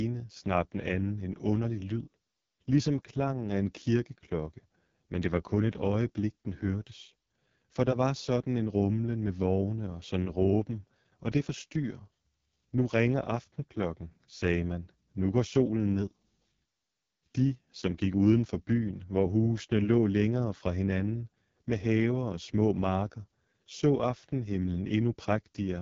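From start to finish the speech has passed through the AMR wideband (HD Voice) codec at its lowest rate. The heavy damage fits the 6.6 kbit/s mode, where the pulse-driven vocal tract model has too few bits to describe each frame. The result is a rough, raspy texture over every stretch of speech. Nothing survives above about 7.4 kHz, and the top band holds only shaped noise standing in for real detail.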